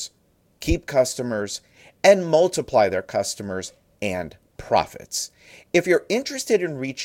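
No technical faults are audible anywhere in the speech recording.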